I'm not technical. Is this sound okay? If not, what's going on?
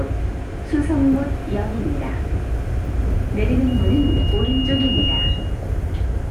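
No. From 3.67 s to 5.60 s there is loudspeaker feedback squeal. A microphone is picking up the loudspeaker it feeds, so the sound keeps going around the loop and getting louder at one pitch. Here that pitch is a high whistle near 2.9 kHz. It swells over about a second and a half until it is roughly as loud as the rest of the recording, then stops at 5.60 s.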